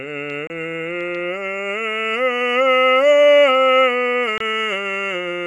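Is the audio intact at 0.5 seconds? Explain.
No. At 0.47 to 0.50 s the music drops out for about 29 ms, a gap at a join of encoded pieces: two separately encoded segments were spliced without trimming the encoder's start delay and end padding. A waveform shows a flat stretch, and a spectrogram shows a narrow blank vertical band.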